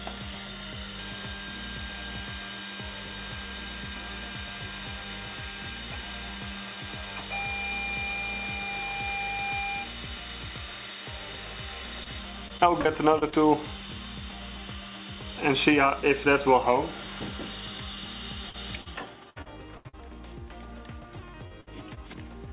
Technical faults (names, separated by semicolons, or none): short concealed packet loss; repeated packet loss (robotic sound); burst of packet loss